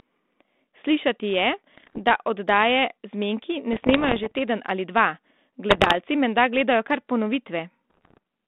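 Speech over a narrowband G.726-style ADPCM line (roughly 200 Hz to 3.6 kHz) breaks up with bit errors on an ADPCM link at 1.74–1.99, 3.72–4.37, 5.70–5.95 and 7.90–8.18 s. These are pops and rasping bursts with brief level jumps, not silent packet-loss gaps, because corrupted bits knock the decoder's step size and predictor off track so that each error rings on.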